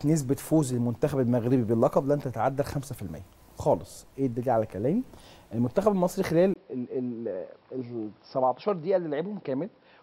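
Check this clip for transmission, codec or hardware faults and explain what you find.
One fault is present. At 6.54 s, after a 20 ms gap, the sound turns dull and slightly quieter to the end, with nothing above 5.5 kHz and a faint new background noise. The input was likely switched to a poorer, narrower-band device.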